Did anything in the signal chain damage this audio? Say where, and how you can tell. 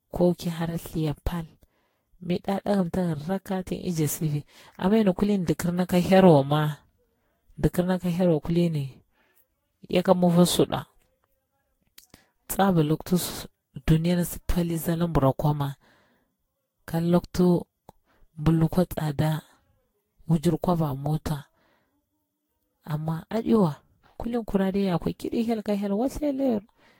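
Yes. The damage sits at the codec stage and runs through the whole speech clip. The audio sounds swirly, smeared and hollow, far more so than a single lossy pass would explain, consonant attacks are blurred, and nothing remains above 16.6 kHz. That points to generation loss, likely from about seven rounds of lossy encoding at around 60 kbit/s, which fits Vorbis. Each decode and re-encode quantises on a shifted frame grid, so noise and spectral holes build up.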